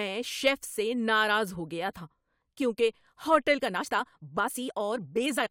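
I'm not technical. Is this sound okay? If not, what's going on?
No. From 3.53 s to the end of the clip, the speech suddenly runs about 1.5 times faster, yet its pitch stays the same. That is a time-stretched section. The likely cause is software squeezing that part to fit a shorter length. To speed it up without raising the pitch, it cut out tiny slices of sound and joined the rest together. Dropping those slices makes the last two seconds sound rushed.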